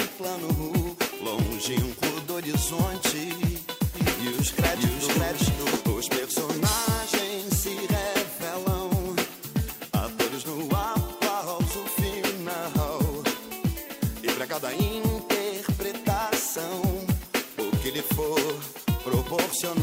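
A second copy of the audio is being mixed in from 3.94 to 5.76 s, likely from a slower capture path or an edit holding two copies out of step. This doubled audio track trails about half a second behind at roughly equal level, dry and full-band, cutting in and out abruptly.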